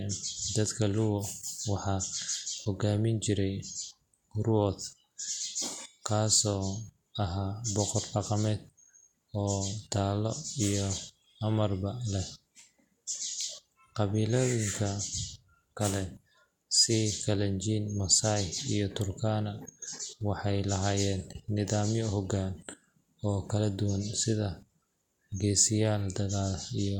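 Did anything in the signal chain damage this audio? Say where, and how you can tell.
No, nothing in the signal chain audibly damaged this speech recording. Listening through it, no stage from capture to playback leaves any mark that would point to a problem.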